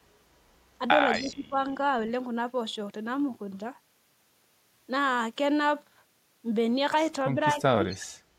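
Echo leak at 1.12–1.34 s and 7.9–8.07 s in this speech recording: a faint copy of the talker returns about 236 ms late, likely from a far-end loudspeaker whose echo canceller let some pickup through. Speech suppressed in double talk at 1.19–1.57 s and 7.53–7.82 s: the voice dips by roughly 15 dB in short pieces, likely because the canceller turned down overlapping speech.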